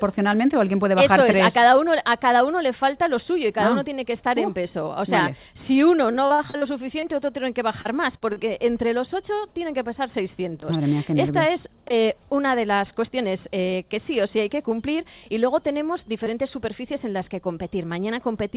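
Repeated packet loss (robotic sound) runs from 6.12 to 6.64 s: five gaps, the longest 40 ms, are patched by extending prior audio, leaving about a third of the stretch concealed and choppy. Short concealed packet loss follows at 7.81 and 8.17 s, where roughly 40 ms each goes missing and is filled with continued sound, heard as brief smears. A short stall from a late packet at 8.33 to 8.39 s holds the sound 34 ms too long before resuming, with nothing lost. Throughout, the band stops at 4 kHz, which fits narrowband G.711 call coding.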